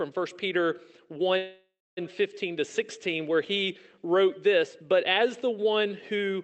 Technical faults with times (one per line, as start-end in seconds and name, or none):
1.37-1.99 call audio freeze